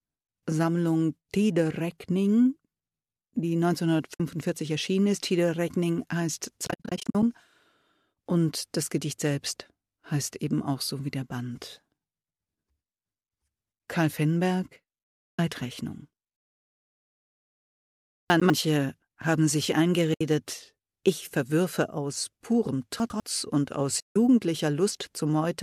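At 4.14 s the speech drops out for about 60 ms. This is AAC frame loss with muting: the decoder zeroes the spectrum of the missing frames, and the overlapping windows fade the sound out and back in, leaving a soft-edged hole. The same fault recurs from 6.67 to 7.23 s as a scattered series of short holes, the longest around 70 ms. Further holes occur from 15.27 to 15.39 s, at 20.14 s for about 70 ms, and from 24.00 to 24.16 s. The hole sizes fit frames of about 10 ms, consistent with the low-delay AAC-ELD stream at 64 kbps that is likely carrying the audio.

At 18.3 to 18.5 s and again at 23.0 to 23.2 s, chunks play out of order. A 100 ms chunk arrives one chunk late and is played after the chunk that should follow it. No audio is lost, but the sequence is swapped and there are hard joins between the chunks, so each spot sounds like a brief jumbled stumble.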